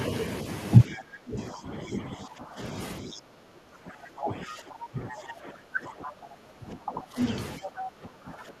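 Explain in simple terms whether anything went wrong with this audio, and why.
The echo canceller likely got confused when both sides talked at once. This is speech suppressed in double talk: the talker dips and loses clarity from 0.87 to 2.61, 3.01 to 7.18, and 7.58 to the end.

It also likely failed to fully remove the loudspeaker sound. This is the other side's voice leaking through, as faint scraps at 0.90 to 1.01, 3.13 to 3.21, 4.48 to 4.56, 5.09 to 5.33, and 7.63 to 7.91.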